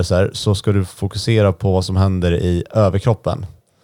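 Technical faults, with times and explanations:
Nothing stood out as a technical problem on listening to the speech in this clip.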